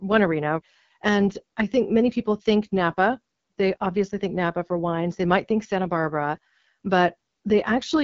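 Throughout the speech the AMR wideband (HD Voice) codec damage is plainly audible: a rough, raspy texture, which fits the 8.85 kbit/s mode. At that rate the pulse-excited vocal tract model is starved of bits. Nothing is present above 7.5 kHz.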